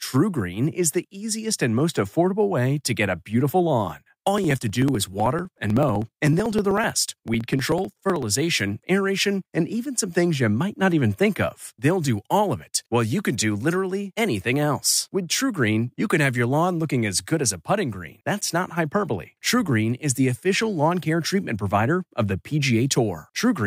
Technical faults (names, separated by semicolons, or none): periodic USB or driver dropouts